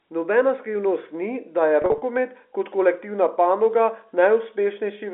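From 1.82 to 2.02 s, packet loss with pitch repetition: about 120 ms lost, scattered in runs of 40 ms at most, bridged by repeated pitch periods. Unlike silent dropouts, these gaps sound held and buzzy.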